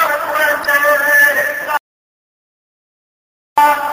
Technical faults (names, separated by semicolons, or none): DECT cordless phone buzz; damaged data in a compressed stream; audio dropout to silence